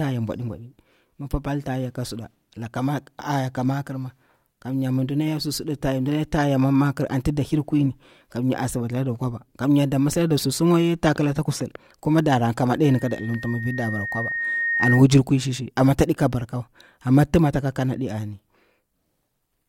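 A speech recording in which, just after "kusul kuma dana ka'a", a pure tone near 1.8 kHz emerges at 12.84 s and swells over roughly two seconds into a piercing squeal, ending at 15.04 s before "kwui shi shi amma" and peaking about 5 dB above the speech. This is loudspeaker feedback squeal: the microphone was picking up its own loudspeaker, and at 1.8 kHz the loop gain passed one, so that frequency fed on itself and kept growing.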